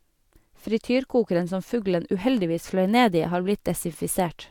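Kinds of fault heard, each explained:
No kinds of fault are heard in this clip.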